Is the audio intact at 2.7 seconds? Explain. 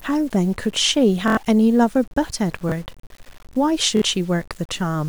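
No. From 2.69 to 2.72 s the playback device ran short of new audio and replayed its last buffer once, a 23.2 ms block that fits a 1024-sample buffer. That piece sounds twice with hard joins, a brief stutter, and about 20 ms of the following audio is lost.

The same moment also carries a grainy, signal-following distortion sitting roughly 30 dB below the speech, likely low bit depth without dither from truncation to around 7 bits. It coarsens quiet detail.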